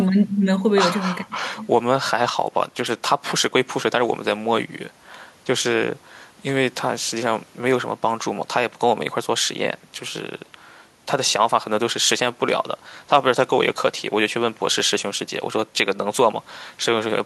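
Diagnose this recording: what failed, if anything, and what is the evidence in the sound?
Nothing in the speech stood out as a fault on listening.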